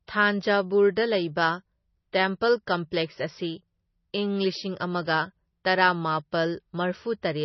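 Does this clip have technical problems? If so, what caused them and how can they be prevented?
Yes. The whole clip sounds watery and swirly, with smeared consonant attacks and nothing above 5.9 kHz, which points to a starved bitrate near 24 kbps, likely from heavy MP3 compression. On a spectrogram, it appears as a flat ceiling with flickering holes beneath. Encode at a higher bitrate, or use a more efficient codec.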